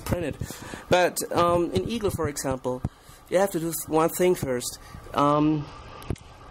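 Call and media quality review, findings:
Bluetooth SBC bit pool drop, 5.32 s to end of clip. Treble abruptly dulls and gritty quantisation noise rises. The congested link forced the encoder to starve the top sub-bands and coarsely quantise the rest, which fits a bit pool cut from 28 to 9 (about 78 kbps).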